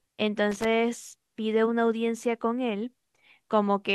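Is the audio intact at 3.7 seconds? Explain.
Yes, at 3.7 seconds the speech plays through intact, with no dropout, click, distortion or other audible fault at that moment.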